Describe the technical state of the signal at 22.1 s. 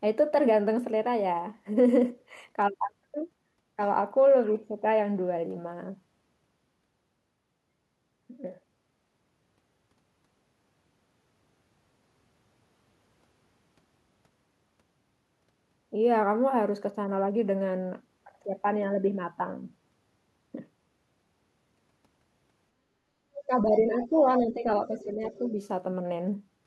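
At 22.1 s the speech signal is intact, with no fault present at that moment.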